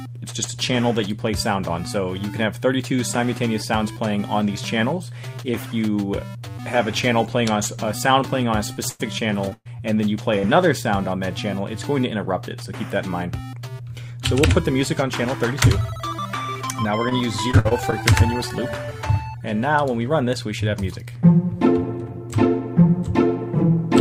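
From 8.73 to 9.81 s the sound turns choppy and robotic, with pieces dropping out: repeated packet loss. About 300 ms of this stretch never arrived, in several holes up to 121 ms long. The receiver patched each one by stretching the last sound, and a small part was rebuilt.

At 10.19 s there is a brief rough, grainy patch with no gap, a lost packet rebuilt from error correction. The decoder played a low-bitrate 20 ms copy carried in the following packet, so the sound is coarser there but continuous.

Between 10.39 and 10.45 s a short smear or wobble replaces about 40 ms of audio, a short concealed packet loss. The decoder extended the preceding sound to fill the hole. Its final 20 ms, from 10.43 s, was again rebuilt from error correction and sounds rougher.

At 17.1 s a second short concealed packet loss leaves a brief smear or wobble where 20 ms of audio was missing and was filled by continuing the sound just before it.

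From 17.51 to 18.01 s the choppy, robotic quality returns as repeated packet loss. About 120 ms went missing in a few gaps of up to 55 ms each, and each gap was covered by extending the last sound, which produces the robotic stutter.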